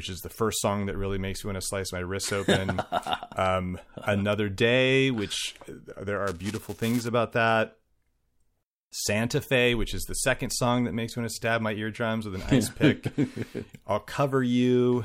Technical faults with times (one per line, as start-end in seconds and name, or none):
6.27-7.07 buffer tearing